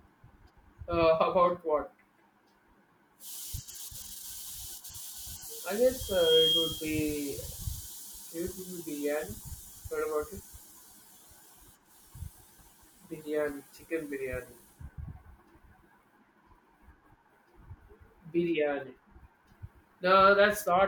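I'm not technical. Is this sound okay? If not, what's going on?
No. From 6.0 to 7.0 s there's loudspeaker feedback squeal: the mic picks up its own speaker, and a piercing 3.2 kHz tone swells up in under half a second.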